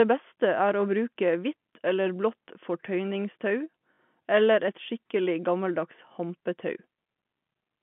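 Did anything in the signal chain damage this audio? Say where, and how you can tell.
Yes, at the network stage. From 3.94 to 3.98 s, just before "eller et skikkelig gammeldags", there is a 40 ms robotic stutter: the same fragment plays again, with a brief buzz at the repeat rate, which fits two lost 20 ms packets. That is packet loss with the last packet repeated. A plain dropout would leave silence instead of replayed sound. The 150 Hz to 3.4 kHz telephone band comes from the G.711 line.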